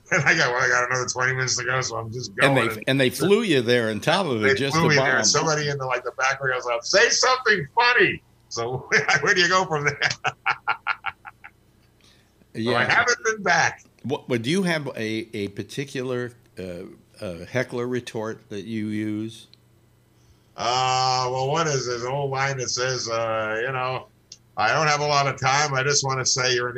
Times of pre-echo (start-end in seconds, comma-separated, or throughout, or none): none